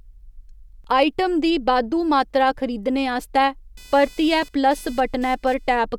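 A speech clip with two separate problems. The first is a brief underrun with held sample at 0.84 s, right before "आइटम दी बाद्धू मात्तरा". The output buffer ran dry for about 5 ms, and the converter just held its last value, so the waveform sits flat for that moment. The second runs from 3.77 s to 5.82 s, starting just after "बाद्धू मात्तरा खरीदने आस्तै". It's computer activity noise, a buzzy, chirpy layer pulsing at around 500 Hz, sitting roughly 30 dB under the speech. That's the machine's processor or graphics load shifting the shared ground of the audio circuit, so the noise follows what the computer is doing, not what's being said.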